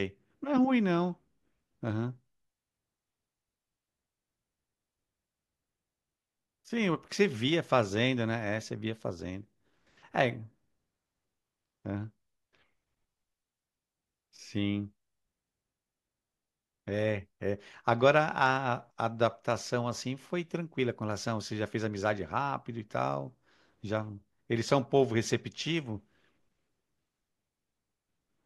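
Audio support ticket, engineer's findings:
No audible technical faults in the speech recording: level, continuity and timing hold steady throughout, with nothing pointing to a capture, processing or transport problem.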